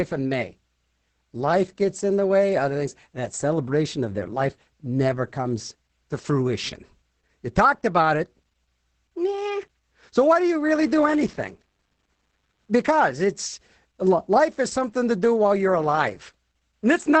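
Throughout, the speech has been squeezed through Opus voice compression in its SILK linear-prediction mode, at a rate that sounds like roughly 10 kbps. The band stops near 8.6 kHz and the excitation is coded coarsely, so the speech comes out muffled, hoarse and faintly robotic.

From 10.73 to 12.95 s, just after "why do you", computer activity noise appears: processor or graphics load disturbs the audio circuit's ground, adding a buzzing, chirping pulse train near 100 Hz, roughly 35 dB below the speech, that follows the machine rather than the sound.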